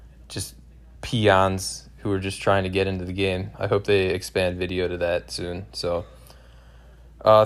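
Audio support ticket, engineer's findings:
No faults found in this speech recording.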